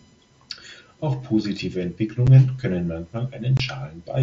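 At 2.27 s the speech drops out for about 7.5 ms, and again from 3.57 to 3.60 s for about 22.5 ms, which fits three consecutive lost headset frames. This is unconcealed Bluetooth headset packet loss: packets between headset and phone never arrived, and nothing filled the gaps. Each gap sounds like a brief chop with abrupt edges. The waveform shows flat-lined holes with sharp edges, and the spectrogram shows thin vertical blank strips bounded by broadband click lines, cut across the light graininess of the mSBC wideband link.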